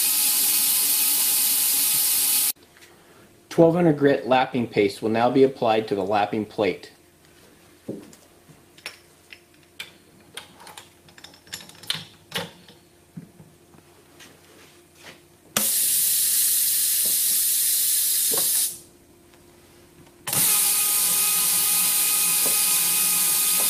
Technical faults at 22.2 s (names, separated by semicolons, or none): none